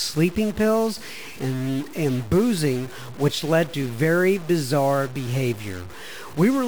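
From start to finish the speech carries a harsh, buzzy grit, with a noise floor sitting around -35 dBFS even in pauses, most likely a stuck bit in the converter path.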